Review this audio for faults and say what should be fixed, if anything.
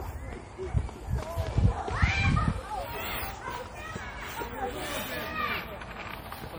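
Generation loss runs through the whole clip. The sound is swirly, smeared and hollow, and attacks blur. This likely comes from MP3 encoding repeated about ten times at a rate that fits 64 kbit/s, each pass adding fresh quantisation noise and spectral holes on a shifted frame grid. To prevent it, keep working copies in a lossless format and encode to MP3 only once, at the final step.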